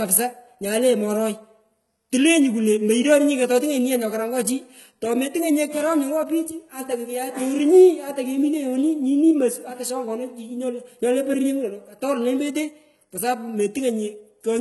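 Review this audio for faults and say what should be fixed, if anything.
HE-AAC compression, throughout the clip: s sounds come out gritty and lispy, and nothing survives above 11.8 kHz. The likely cause is spectral band replication copying lower bands upward, so harmonics misalign; the heavy damage fits roughly 16 kbps. Encoding at a higher bitrate, or with plain AAC, would prevent it.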